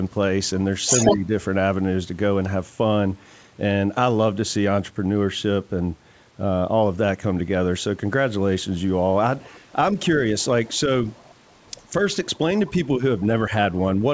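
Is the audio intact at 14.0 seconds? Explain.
No. From 13.97 to 14.02 s the speech briefly dips by about 5 dB, a short duck lasting around 50 ms. The likely cause is speech suppressed in double talk: with both sides talking, the echo canceller mistook the talker for loudspeaker echo and turned it down.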